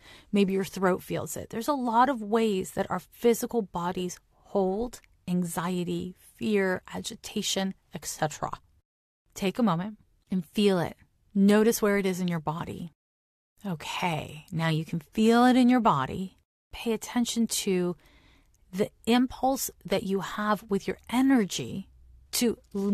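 A speech recording, and there is no technical fault to report in it. Nothing in the audio calls for a time or a cause.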